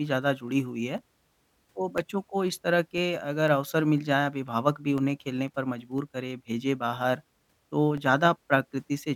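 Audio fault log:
0.48–8.98 s, periodic USB or driver dropouts: a tiny gap of silence, around a millisecond, every 0.5 s, ticking only under speech; the strict regularity separates it from random clicks.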